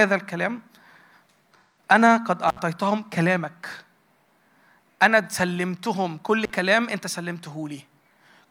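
From 1.59 to 1.78 s there is AAC frame loss with concealment: about 171 ms of coded audio went missing, which fits roughly four lost frames, and the decoder patched the gap from the last good spectrum. It sounds like a brief smeared, noisy or phasey patch, and a spectrogram shows a blurred block where the harmonic detail loses definition.

Intermittent contact follows at 2.48 to 2.59 s, with the line open for about 65 ms, and again at 6.43 to 6.50 s, open for about 44 ms. Each time a loose connection briefly breaks, so the sound drops out or breaks up with crackle at both edges and faint hiss underneath. The waveform shows a sudden collapse framed by sharp spikes.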